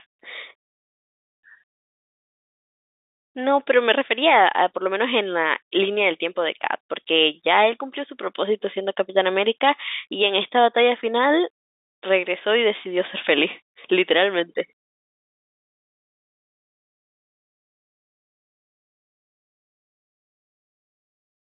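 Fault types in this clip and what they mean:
Nothing stood out on listening to this speech, which comes through with the narrow band of an ordinary telephone line.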